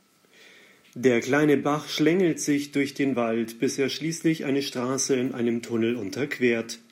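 Nothing in the speech signal departs from normal, with no dropouts, distortion, level jumps or timing disturbances anywhere in the recording.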